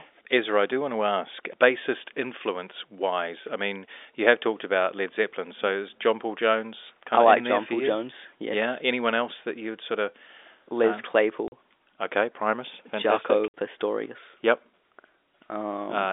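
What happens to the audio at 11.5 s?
At 11.48 s the speech drops out completely until 11.52 s. This is packet loss filled with silence. Audio packets never arrived, and the receiver played nothing in their place. The hole lasts 40 ms, which fits two lost 20 ms packets. The sound stops and restarts abruptly, with hard edges. Around it, the telephone band of the G.711 line stays narrow, roughly 300 Hz to 3.6 kHz.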